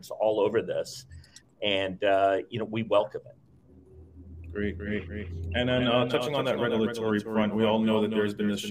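A doubled audio track begins abruptly at 4.40 s and runs to the end of the clip. From that point a second full-band copy of the same sound trails the original by around 200 ms, only a few decibels quieter, with no decay or room colouring, so everything takes on a hard, slapback-like echo. This likely comes from the signal being captured again through a slower path, or from an edit leaving two copies out of step.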